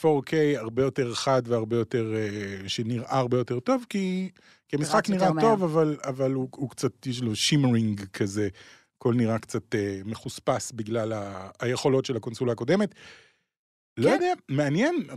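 Nothing in this speech recording stood out as a technical fault on listening.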